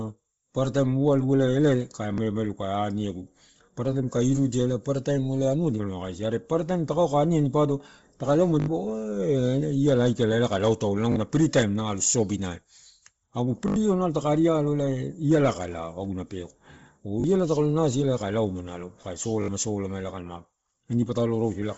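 Throughout the speech, the band stops at 7.7 kHz and the upper range has a breathy, grainy texture. This is likely Bluetooth LC3 compression: the transform codec zeroes much of the upper spectrum and fills it with noise. The depth of the damage points to a low bitrate, around 24 kbps with short 7.5 ms frames.

A repeated buffer occurs at 2.14, 8.6, 11.12, 13.68, 17.2 (just before "iala taka") and 19.42 s. Each time, fresh audio arrived late, so the last chunk, which fits a 20 ms buffer, played again, two to four extra times, with a hard join at every repeat. It sounds like a brief buzzy stutter, and roughly 40 to 70 ms of the speech is lost at each event.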